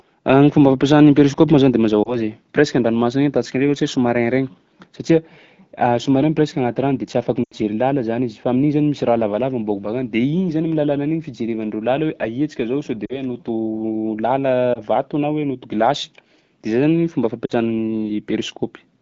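Speech clip, AMR wideband coded (light, clear, fitting about 12.65 kbit/s), with lost AMR speech frames at 2.03–2.17 s after "moa zany de mazava", 7.43–7.54 s between "rano de tsy afaky" and "làla zany", 13.05–13.23, 14.73–14.80 and 17.46–17.52 s. The decoder repeats the last good frame and fades it, giving brief warbles and drops to near silence. On a spectrogram these show as smeared, fading harmonics, and on a waveform as short envelope sags.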